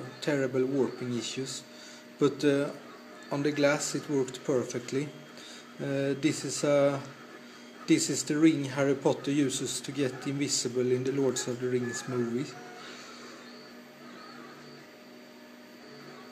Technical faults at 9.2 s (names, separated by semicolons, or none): dropped samples